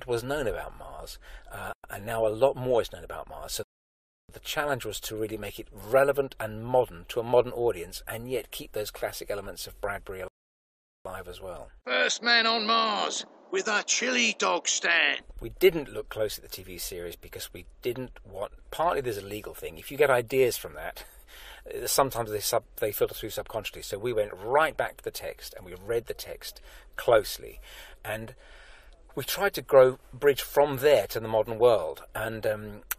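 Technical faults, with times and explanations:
3.63–4.29 s and 10.28–11.05 s, rebuffering stall: the player exhausted its downloaded audio, went silent for 0.66 s and 0.77 s, then resumed exactly where it stopped, adding time without losing anything.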